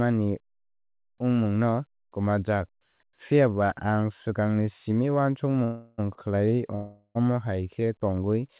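At 5.64 to 6.00 s the speech stops moving forward and the last sound is drawn out for about 336 ms as a fading buzz, likely a call audio freeze where delayed packets let the jitter buffer run dry. On a spectrogram the last frame's harmonics smear into flat horizontal bands that fade, and the waveform shows a decaying repeated pattern before speech resumes with nothing lost.

At 6.14 to 6.19 s a short stall from a late packet holds one sound about 32 ms too long, with a faint buzzy dip. It appears as a brief stretched column on the spectrogram and a tiny repeated cycle in the waveform.

At 6.75 to 7.17 s a second call audio freeze, likely from the same buffer underrun, stretches the sound for about 400 ms. The held buzz decays and then goes quiet for about 70 ms. The spectrogram shows fading streaks, then a blank gap, all below the 4 kHz ceiling of the narrowband call path. Speech then picks up where it stopped.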